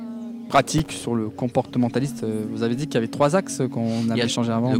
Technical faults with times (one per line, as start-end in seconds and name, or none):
0.78-1.05 processor overload crackle